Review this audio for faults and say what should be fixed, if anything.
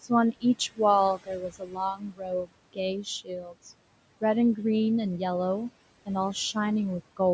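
Noise suppressor artifacts run through the whole clip. The suppressor treats the steady room noise, which sits about 17 dB below the speech, as something to remove frame by frame, pulling it down by about 21 dB in the gaps and letting it come back under the words. The background therefore pumps in step with the speech. On a spectrogram, the noise floor shows as dark holes between phrases and a grey haze that reappears behind each phrase, all capped at 8 kHz by the normal call microphone filtering. Prevent this by easing the suppressor's depth and smoothing its gain over time.

Speech cut by the noise suppressor happens three times: 0.32 to 0.80 s, 1.16 to 2.51 s and 3.24 to 3.71 s. Here the suppressor mistook quiet speech for noise and pulled it down by about 19 dB, about 22 dB and about 19 dB respectively, leaving soft sounds faint or swallowed. About a tenth of a second is affected in the first span, around a second in the second and roughly a third of a second in the third. 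The waveform shows sudden dips inside speech, and the spectrogram shows faded, broken-off consonant energy. Prevent this by raising the suppressor's speech-presence sensitivity so low-level speech is protected.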